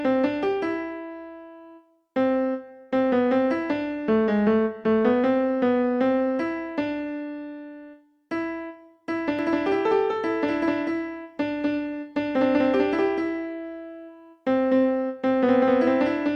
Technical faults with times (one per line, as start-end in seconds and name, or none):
9.39-16.35 doubled audio track